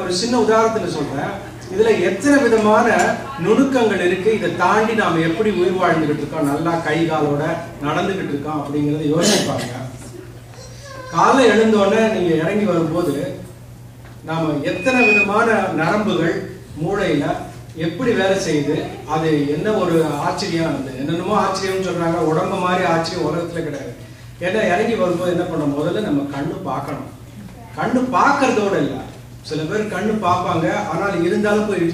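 At 14.68 to 15.32 s a loudspeaker feedback squeal swells over roughly 0.4 s into a steady 2.5 kHz tone. It grows from the loop itself, unlike a fixed test tone.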